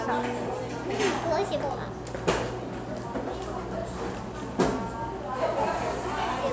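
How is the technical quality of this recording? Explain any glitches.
The technical quality of this recording holds up, with no glitches to explain.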